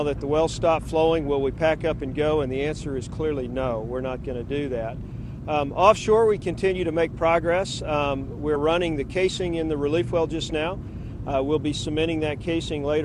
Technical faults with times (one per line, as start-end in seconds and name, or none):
8.55 compressed frames skipped